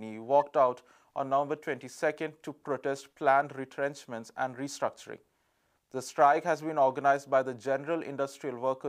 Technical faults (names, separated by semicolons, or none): corrupt frame decoded